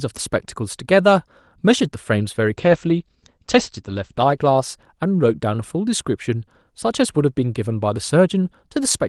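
From 2.58 to 5.17 s the speech turns muffled and rough, its top end cut near 8 kHz instead of 12 kHz, worst for 1.5 s. This call bitrate drop forced Opus into coarser coding, consistent with a fall from 32 to 13 kbps.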